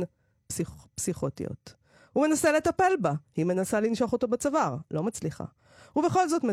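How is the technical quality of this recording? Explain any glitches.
Nothing here glitches at all, so there's no technical fault to point to anywhere in this speech recording.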